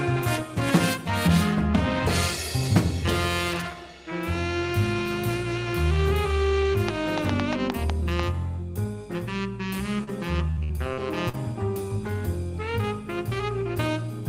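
From 6.89 to 8.21 s a train of clicks sits on top of the audio: about seven sharp pulses of similar shape, roughly five per second but irregularly spaced, peaking around 15 dB above the surrounding sound. They tick through pauses as well as louder passages, so they come from something added to the signal, likely electrical interference or a faulty connection or power supply. Concealment glitches, by contrast, disturb the sound itself.

At 10.03 to 10.10 s there is a short concealed packet loss. About 40 ms of audio never arrived, and the decoder filled roughly 35 ms by extending the last sound before fading back into real audio. It is heard as a single brief smear or wobble rather than a crisp click. Its length and smoothed edges set it apart from the earlier clicks, and it is a one-off rather than a recurring pattern.

Inside that same moment, 10.07 to 10.09 s, a lost packet was rebuilt from error correction. 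A 20 ms stretch was replaced by the low-bitrate copy carried in the following packet, so it leaves no hole, just a rougher, noisier texture. That roughness with no missing sound is what separates it from the guessed-at continuation around it.

From 10.51 to 11.35 s comes repeated packet loss, producing choppy sound with pieces missing. Four separate gaps totalling about 200 ms, the longest 63 ms, were each patched by continuing the previous sound. About a quarter of this span is concealed, with only a small part recovered through error correction. The rapid recurrence distinguishes it from the isolated loss at 10.03 s: one patch barely ends before the next begins.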